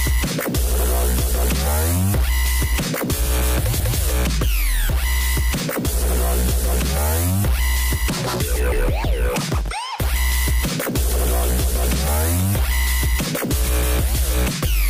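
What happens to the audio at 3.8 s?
At 3.8 s there is a CD skip. A knock or a flaw on the disc made the laser jump to another turn of the spiral, so the player mutes for a few milliseconds and resumes from a different place, one or more disc turns (each 0.1 to 0.3 s) forward or back. It is heard as a brief tick followed by a sudden jump. A plain dropout resumes where it left off, but here the audio continues from another point.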